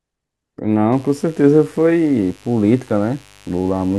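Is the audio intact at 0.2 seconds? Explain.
Yes, the audio is intact at 0.2 seconds, with no audible fault at that moment.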